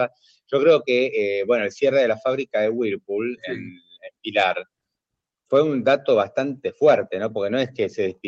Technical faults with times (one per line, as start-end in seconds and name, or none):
3.76-4.10 sound cut by the noise suppressor